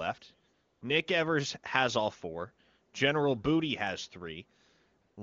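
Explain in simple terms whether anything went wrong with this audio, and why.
AMR comfort noise at 0.53 to 0.81 s and 5.01 to 5.17 s: the phone judged these pauses silent, so the receiver filled them with smooth, artificial hiss.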